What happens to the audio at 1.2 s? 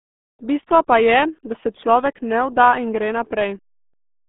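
At 1.2 s you're hearing the RealAudio 14.4 codec, and it's there for the whole clip. The speech is squeezed into roughly a 200 Hz to 3.5 kHz band with nothing above 3.8 kHz, so it sounds muffled and gargly, which fits an 8 kbit/s dial-up-era coder.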